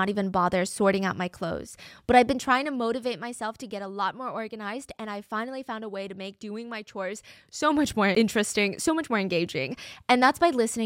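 From 2.26 to 3.5 s, just before "to get a lot", there's zipper noise. The level drops about 10 dB in unsmoothed 1 dB steps, around ten a second, so it ticks audibly. The same thing happens in reverse from 7.08 to 8.02 s, between "to make doing my" and "interesting so much more", as the level climbs back about 10 dB.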